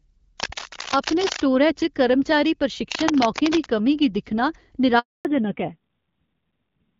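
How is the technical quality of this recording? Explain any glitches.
The recording has three distinct problems: two bursts of scratching, a brief dropout, and a clear loss of bandwidth near the end.

From 0.40 to 1.41 s and again from 2.91 to 3.71 s, a dense, uneven rasp rides over the speech, only a few decibels below it. This is cable scratch noise, likely from a worn cable, plug or control being moved, so that its contact resistance jumps about rapidly and injects ragged bursts of noise for as long as the movement lasts.

At 4.99 s, right after "गी दिक्खना", the speech dies away quickly and the line stays silent for 260 ms until 5.25 s. That is a handover gap: the call was passed from one network to another, no speech frames came through during the switch, and whatever was said in that quarter-second is simply gone.

When the audio returns at 5.25 s it stays muffled and rough through the end of the clip, with nothing above 4 kHz. 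That is a fallback to narrowband. Before the handover, the call ran on the AMR wideband (HD Voice) codec, sounding as an HD Voice link at around 12.65 kbit/s would, with light codec colouring. Afterwards it dropped to an older narrowband codec. The rasp points to a low rate of about 5.9 kbit/s, and the missing upper band takes away the crispness of consonants.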